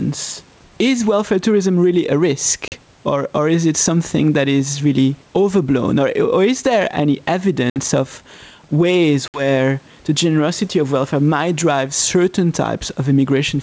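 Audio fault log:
Throughout: gain pumping. The room background swells by around 10 dB in each pause and ducks under every loud syllable, squashing loud and soft parts together, likely from excessive input gain with a fast limiter. The waveform envelope looks flattened, with the noise floor rising between phrases.
2.68, 7.70, 9.28 s: packet loss on an ADPCM call. Hard-edged silences of 40 ms after "welfare tourism really a", and 60 ms after "or is there any" and "of ways". The decoder's predictor falls out of step, so speech resumes slightly distorted, then settles. Spectrograms show sharp full-band gaps.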